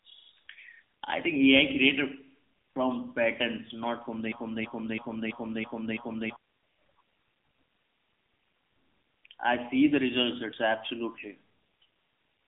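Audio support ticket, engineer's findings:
AMR narrowband mobile codec, throughout: buzzy, synthetic speech band-limited to 150 Hz–3.6 kHz, nothing above 3.7 kHz; damage level fits low-rate AMR-NB, around 8 kbps.

Broken-record loop, 4.32–6.36 s after "from patterns not from": a 330 ms fragment repeats six times back to back, original audio lost; likely a stalled player or stream buffer.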